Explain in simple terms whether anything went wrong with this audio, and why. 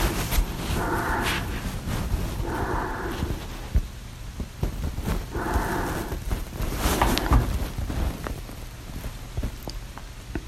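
There are three tiny skips in the speech, at 1.45, 4.44 and 7.43 seconds, evenly spaced three seconds apart. That's audio missing between chunks, likely the recorder dropping a sliver, under a hundredth of a second, each time it switched to the next chunk.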